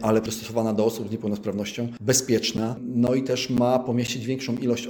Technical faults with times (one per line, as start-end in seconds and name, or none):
2.57-4.58 periodic USB or driver dropouts